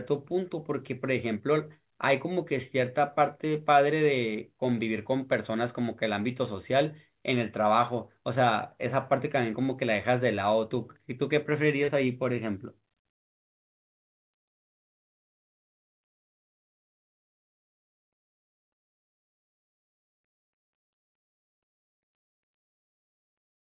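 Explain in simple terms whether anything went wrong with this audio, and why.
Something went wrong once, at about 11.84 to 11.90 seconds. This is short concealed packet loss. About 40 milliseconds of speech arrived too late to be played. The receiving end covered the gap by stretching the last sound it had, for about 36 milliseconds, then blended back into the real speech. It comes across as a tiny smear or wobble. Through the whole clip, the call line carries nothing above 4 kHz, which gives the narrow phone sound.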